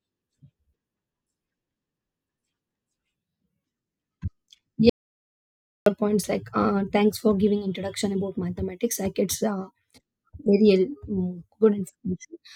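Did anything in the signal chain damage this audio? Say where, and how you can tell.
Yes. There is an audio dropout to silence from 4.89 to 5.86 s. The speech cuts off mid-flow into silence, with no room tone, for about 0.97 s. The likely cause is the input, a device or link dropping out, while the recorder kept writing silence.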